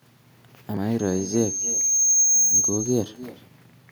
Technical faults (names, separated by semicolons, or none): echo with no canceller; loudspeaker feedback squeal